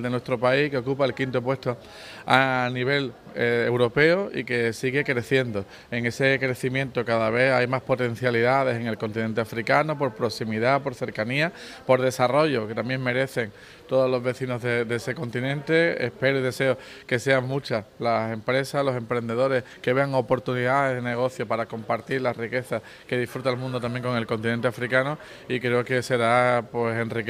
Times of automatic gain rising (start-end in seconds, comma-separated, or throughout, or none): none